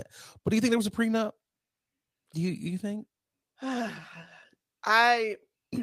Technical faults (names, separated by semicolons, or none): none